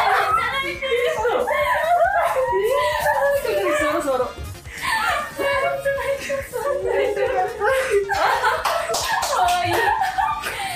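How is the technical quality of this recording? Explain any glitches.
No glitches can be heard anywhere in the recording, and the signal holds steady throughout with no interruptions, dropouts or sudden changes in level.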